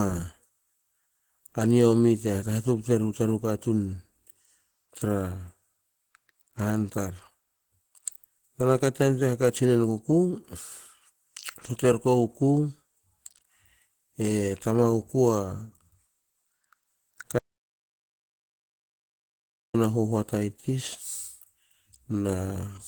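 Right from the start the speech has a hoarse, muffled, grainy quality that never lets up, most likely Opus compression at a low rate, probably around 16 kbps in its hybrid speech mode, even though the top end still reaches about 20.1 kHz.

At 11.81 s there's a repeated buffer: one short slice of about 5.33 ms gets played twice with a hard join, which fits a 256-sample buffer. It's too brief to hear as a stutter, so it comes across as a small click or tick.

From 17.39 s to 19.74 s you get an audio dropout to silence. The signal cuts to silence for roughly 2.36 s, with no room tone at all, and comes back on "a huhuata i". That points to the input being lost rather than a pause in the speech.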